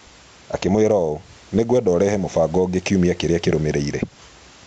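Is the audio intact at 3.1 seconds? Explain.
No. At 3.1 s you're inside a Bluetooth SBC bit pool drop running from 0.86 to 3.91 s. The treble goes dull and gritty, which fits the bit pool falling from 31 to 14, around 99 kbps.

There's also gain pumping across the whole clip. The gain swings by roughly 10 dB, likely from gain set too high with a fast limiter clamping down.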